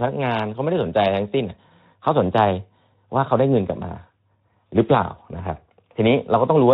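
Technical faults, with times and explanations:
4.07 to 4.10 s, VoIP packet loss concealed by the speech codec. About 20 ms of sound goes missing, which fits a single lost frame. The decoder fills the gap by repeating its last pitch and vocal-tract filter at falling gain. The result is a short stretched patch of buzzy tone or coloured noise. The next frames depend on that guessed state, so the sound stays weak or distorted just after the gap. The Speex coding, which points to a mid-rate setting near 15 kbps, adds its light coding damage around it.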